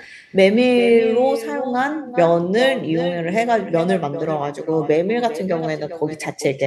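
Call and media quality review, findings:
Speech shadowed throughout by a quieter, thinner repeat about 10 dB down, arriving roughly 0.4 s after each phrase. Echo with no canceller: far-end loudspeaker output picked up by the far-end microphone, no echo cancellation removing it, returned over the network round trip. Check far-end AEC enablement and reference-signal path.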